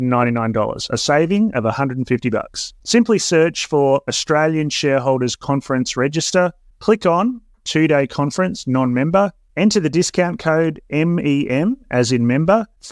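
Nothing technical stands out in this speech recording, so there's no fault here to pin to a time or trace back to a cause.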